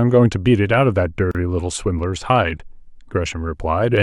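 At 1.31 s the speech breaks for about 34 ms, a gap at a join of encoded pieces. Silence left from separately encoded segments opens with smeared edges. Unlike a dropout, nothing is lost, and the speech resumes exactly where it stopped.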